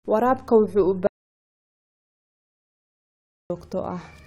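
At 1.07 s the speech cuts off mid-flow into an audio dropout to silence lasting about 2.43 s, until 3.50 s. The gap is silent with no room tone, likely from the input being lost while recording continued. Speech resumes abruptly.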